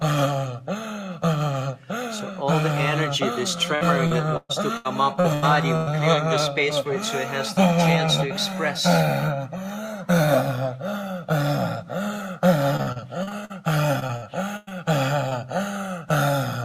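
From 3.75 to 5.89 s there is repeated packet loss (robotic sound). Seven gaps occur, the longest 124 ms. Each is patched by extending the last sound, so about a quarter of the stretch is filled in. It sounds choppy. The same fault returns from 12.77 to 13.52 s, with seven gaps up to 48 ms, and from 14.00 to 14.73 s, with five gaps up to 102 ms.

Between 15.29 and 15.33 s comes a short concealed packet loss. About 20 ms of audio arrived too late or not at all. The decoder filled the hole by continuing the previous sound, then blended back into the real signal. It comes across as a brief smear.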